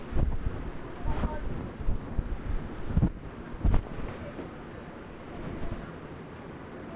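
Nothing here trips a technical fault: the sound runs along with no glitches, dropouts or odd artefacts to flag at any point.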